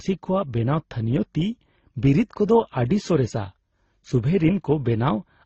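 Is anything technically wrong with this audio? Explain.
Yes. Throughout the speech, the signal likely went through transcoding between lossy codecs, with each low-bitrate encoder re-coding the previous one's errors. Nothing remains above 7.9 kHz, so it sounds dull, and smeared, warbly artefacts from several coders pile up, fitting an MP3, AAC and Opus chain.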